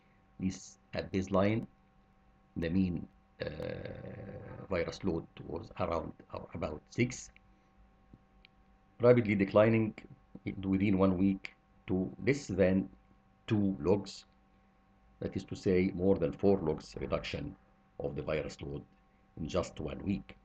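A regular ticking runs through the opening seconds of the audio: a short click every half second from 0.63 s to 3.63 s, around seven in all, heard only where there is sound to interrupt. These are periodic USB or driver dropouts. Something blocks the USB bus or the audio driver at a fixed interval, and each time roughly a millisecond of audio is lost and replaced by silence, so the waveform breaks off and resumes abruptly.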